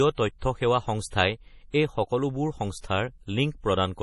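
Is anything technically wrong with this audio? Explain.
Yes. Throughout the speech, nothing sits above 11.4 kHz, with smeared, swirly MP3 artefacts. This is likely low-bitrate audio saved at a high bitrate. A large re-encode cannot restore discarded detail, unlike a clean low-pass.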